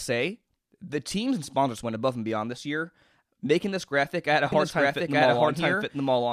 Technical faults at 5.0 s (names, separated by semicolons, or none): doubled audio track